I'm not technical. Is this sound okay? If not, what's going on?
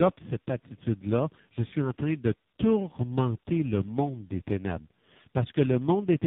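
No, it's not quite okay. The speech sounds rough, muffled and warbly the whole way through because of tandem speech coding. The call likely passed through about four different phone-network compressors, each re-squashing the last one's output, and nothing above 3.8 kHz survives.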